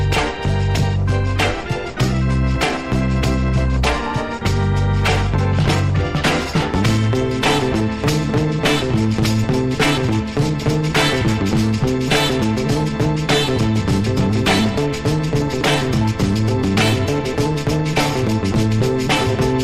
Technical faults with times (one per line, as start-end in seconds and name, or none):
0.00-19.63 clock drift between sender and receiver
3.81-18.82 repeated timing corrections